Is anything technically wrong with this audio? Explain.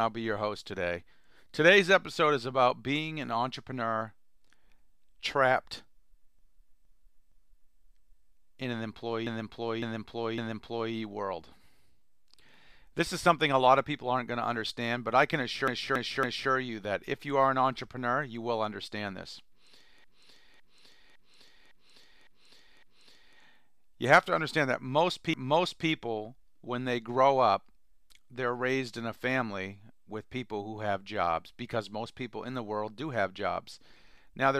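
Yes. The speech stutters five times, with the same short stretch played back-to-back: at 6.39 to 7.78 s (a 0.46 s block heard three extra times), 9.27 to 10.94 s (0.56 s, three extra), 15.68 to 16.51 s (0.28 s, three extra), 20.04 to 23.38 s (0.56 s, six extra) and 25.34 to 25.89 s (0.56 s, one extra). This is repeated frames: a run of compressed frames was written or sent again, so the decoder replays it. Each repeat lengthens the audio, by about 7.8 s in total.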